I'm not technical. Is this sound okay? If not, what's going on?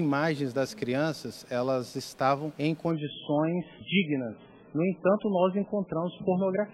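No. At 2.91 s the sound suddenly turns dull and watery, and stays that way to the end. This is an adaptive stream at a lower bitrate: the connection slowed, so the player switched to a much smaller version, losing everything above 3.5 kHz.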